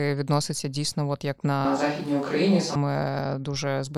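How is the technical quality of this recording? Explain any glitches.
One glitch mars this speech recording. From 1.65 to 2.75 s, just after "відноситься дійсно от як", the sound turns abruptly roomy, hollow and thin, likely a switch to a distant microphone. Unlike a plain low-cut filter, room reflections and faint background noise, well below the speech, arrive with it, while loudness stays roughly unchanged.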